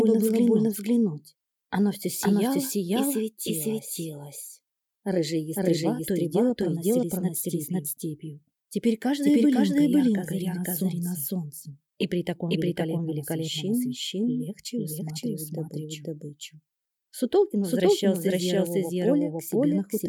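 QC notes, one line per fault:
Throughout, doubled audio track: every sound is followed about half a second later by a second full-band copy at roughly the same loudness as the first, so each event seems to repeat. The repeat carries no decay or room colouring, which rules out an acoustic echo or reverb. The likely cause is the same signal reaching the mix twice, once through a slower capture path or an edit that leaves two copies out of step.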